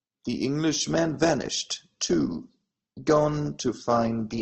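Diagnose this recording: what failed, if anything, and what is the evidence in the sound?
The adaptive stream dropped to a lower bitrate when the network connection slowed. From 0.80 s to the end, the speech loses everything above 8.4 kHz and turns thinner and more artificial with no gap, which fits a switch from roughly 64 to 16 kbit/s Opus.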